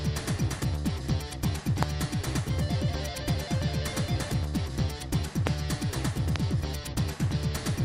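A loud pop strikes at 1.83 s, 5.47 s and 6.36 s, each a single burst about 20 ms long, roughly 20 dB above the sound, likely a voltage spike from a plug, switch or static. Unlike a dropout, the sound continues uninterrupted underneath.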